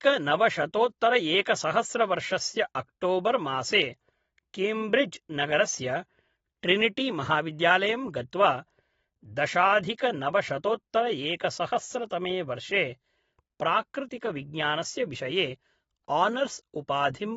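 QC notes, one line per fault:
Throughout, AAC compression: nothing comes through above about 7.6 kHz, so the speech sounds dull and smeared, with a warbly, fizzy edge on sibilants. That's likely a low-bitrate AAC-LC encode, which fits something around 24 kbps.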